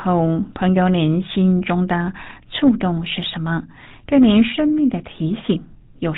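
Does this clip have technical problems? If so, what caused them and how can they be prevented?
Yes. The speech carries GSM full-rate codec damage from start to finish, and it is plainly audible. The sound is buzzy and gravelly, with no content above 4 kHz. That points to the original 13 kbps GSM coder. It models the vocal tract as a filter and excites it with a sparse, regular pulse train, keeping only one in three excitation samples. That coarse excitation causes the roughness. To prevent it, record or route the audio over a wideband path instead of a legacy GSM phone link.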